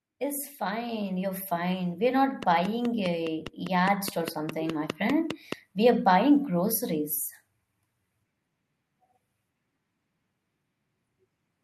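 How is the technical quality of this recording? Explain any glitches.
The recording has two audible problems: the level swells twice and a run of regular clicks sits over the middle section.

Automatic gain rising, from 0.17 to 1.79 s and again from 3.66 to 5.01 s: the gain control judged the input too quiet and raised it gradually, by about 6 dB and then about 4 dB, so voice and background swell together.

Train of clicks, from 2.43 to 5.53 s: around fifteen similar clicks arrive at a steady 4.8 per second, peaking about 15 dB above the speech. They are likely interference from nearby equipment or a faulty connection or power supply, and they tick through pauses too.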